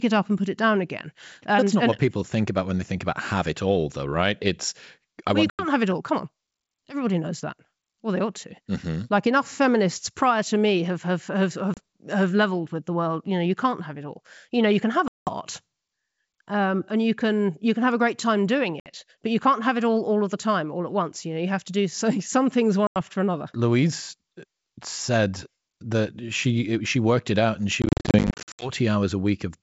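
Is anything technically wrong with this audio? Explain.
Yes: packet loss on an ADPCM call, heard as hard-edged silent gaps at 5.50 s (90 ms), 11.74 s (30 ms), 15.08 s (190 ms), 18.80 s (60 ms) and 22.87 s (90 ms), plus a scattered burst from 27.82 to 28.71 s (about 460 ms lost in runs up to 70 ms). Unlike concealed loss, the holes aren't filled. The G.722 decoder's predictor and step size drift from the sender's, so sound returns slightly distorted before settling.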